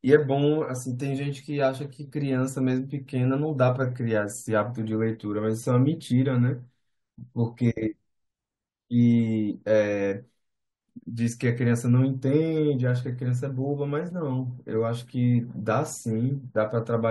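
No technical faults are audible anywhere in the recording.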